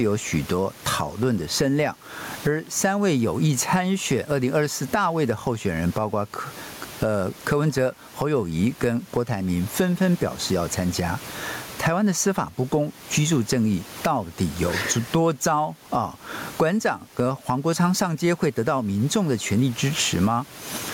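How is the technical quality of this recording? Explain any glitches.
The recording has one fault that runs through the whole clip: gain pumping.

Gain pumping, throughout: the room background sits about 33 dB below the speech, with the level swinging by around 20 dB. This is likely a microphone gain set far too high, with a fast limiter or compressor clamping down on each loud syllable. Loud and quiet passages end up squashed together.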